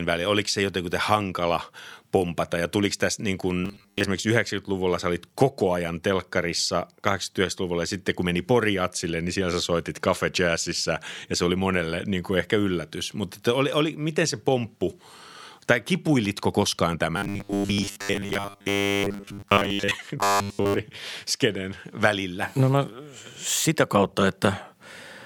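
A rigid, metallic buzz at 100 Hz replaces the speech from 3.65 to 4.06 s, right after "ja tuliko tässä niin", again from 17.17 to 19.94 s after "tai kipuilitko koskaan", and from 20.20 to 20.82 s, following the original only roughly. This is robotic sound from repeated short buffers, likely caused by audio arriving too seldom, so the same 10 ms snippet loops while most of the real audio is skipped.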